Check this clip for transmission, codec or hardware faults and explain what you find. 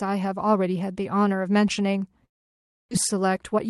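One transmission fault stands out in this speech: a long network dropout. The sound is carried over a WebRTC call path, its highs stopping near 12 kHz, which fits Opus at roughly 40 kbps.

From 2.25 s to 2.93 s the speech breaks off. What remains of that stretch is a fading smear drawn from the last sound, followed by near-silence lasting about 0.63 s. When the sound resumes, about 0.6 s of it is simply gone, and the timing afterwards sits slightly later, by around 40 ms. The likely cause is that packets stopped arriving. The receiver stretched the final fragment to cover the gap, let it decay, and picked up again from later audio without ever recovering the missing part.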